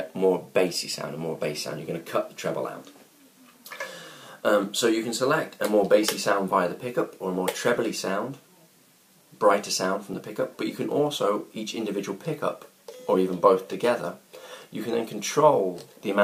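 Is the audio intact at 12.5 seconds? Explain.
Yes, the audio at 12.5 seconds is intact, with no dropout, click, distortion or other fault at that moment.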